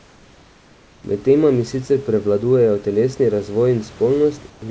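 Comfort noise in place of the background fills 0.00–1.04 s and 4.50–4.62 s, likely from discontinuous transmission: a steady, featureless hiss about 3 dB and 2 dB quieter, uniform and textureless on a spectrogram.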